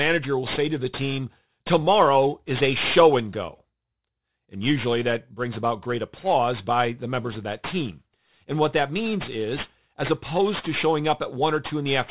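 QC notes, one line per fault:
Throughout: aliasing. Sibilants sound gritty and metallic because high content folds back around 4 kHz into unrelated tones, roughly 15 dB under the speech, which fits a drop to an 8 kHz rate without filtering. Unlike plain band-limiting, the spectrum runs hard up to the edge.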